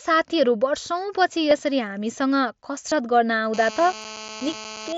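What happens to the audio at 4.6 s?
A GSM phone buzz, 3.54 to 4.93 s: rectified 217 Hz bursts from a nearby 2G phone make a steady raspy buzz, seen as stacked spectrogram harmonics.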